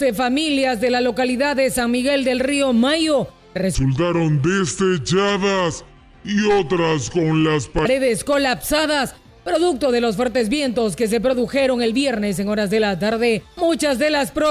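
Wrong sample rate from 3.75 s to 7.85 s: for these four seconds the audio runs at about two-thirds of its proper speed, and its pitch drops by roughly seven semitones, so everything sounds low, heavy and dragged out. Speed and pitch fall together because the samples are being clocked out more slowly than they were captured, with no rate conversion in between. The 0.667 ratio fits material recorded at 48 kHz being played back at 32 kHz.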